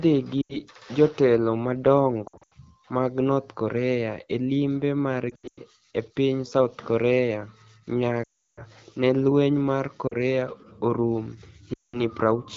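Lost AMR speech frames at 0.41–0.57 s, 2.27–2.53 s (before "mag north"), 5.29–5.60 s (between "e limbe" and "e piniy"), 8.24–8.62 s (before "ni e lweniy mar"), 10.08–10.14 s and 11.74–12.02 s. Frames failing their checksum make the decoder reuse the last good pitch and vocal tract settings with falling gain. The sound smears and fades rather than cutting off with a click. The 8.24 s run, about 340 ms, fades fully, while the scattered losses at 2.27 s and 5.29 s, with runs of up to 80 and 100 ms, drop to near silence in bursts. Speech is clear elsewhere, which fits wideband coding near 12.65 kbit/s.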